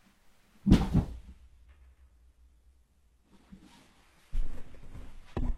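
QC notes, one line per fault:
1.12–5.57 s, adaptive stream at a lower bitrate: at 1.12 s the sound abruptly loses its top end, with nothing above 12.3 kHz, and stays that way to the end, with no gap at the switch. Codec artefacts rise and the upper range turns thin. The character points to the stream stepping down from an AAC-LC rendition at 96 kbit/s to a very low-bitrate HE-AAC one, on the order of 16 kbit/s, as the connection slowed.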